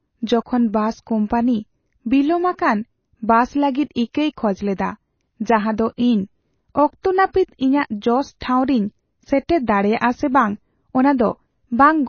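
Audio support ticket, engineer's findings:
Watery, swirly speech throughout, nothing above 6.6 kHz. Likely MP3 compression starved of bits, around 24 kbps, cutting treble and zeroing weak frequency lines frame to frame.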